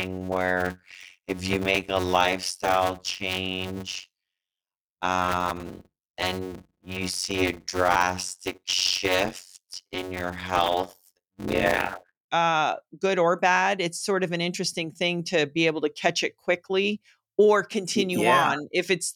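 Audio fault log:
0.00–12.15 s, block size mismatch (padded): a steady buzz at 91.9 Hz sits under the speech until just before "uh good or bad". Each block handed on is shorter than the block the next stage reads, which fits 256-sample blocks padded with zeros, so a short silent gap recurs at the block rate. Because those gaps add time, the speech runs at 0.533 of normal speed yet keeps about its normal pitch.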